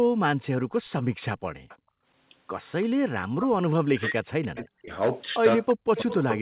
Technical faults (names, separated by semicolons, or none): background gated by the echo canceller; echo leak; speech suppressed in double talk